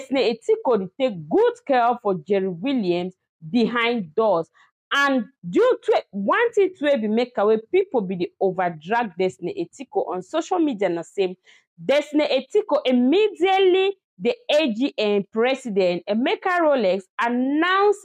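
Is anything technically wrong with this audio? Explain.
No, nothing here is technically wrong; it's clean, with no faults to point out.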